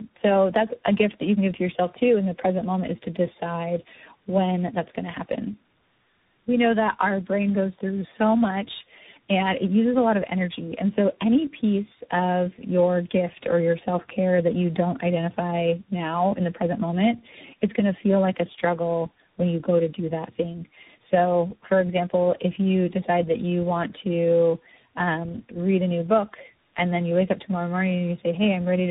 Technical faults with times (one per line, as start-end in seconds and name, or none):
0.00-28.91 tandem speech coding